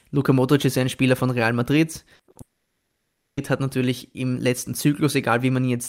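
A stretch of speech breaks up around the middle. Short concealed packet loss at 2.15 to 2.21 s and again at 2.31 to 2.37 s leaves brief smears, each bridging about 40 ms, too short to become a held tone. Between them, at 2.21 to 2.29 s, a burst of packet loss is longer, about 60 ms, so the continued sound is audibly held and fades rather than merely smearing. From 2.41 s the sound is stretched for a moment, then gives way to about 0.82 s of silence, unlike the brief fills before it. Speech returns at 3.39 s with "hat natürlich im letzten", with nearly a second missing, likely a long network dropout.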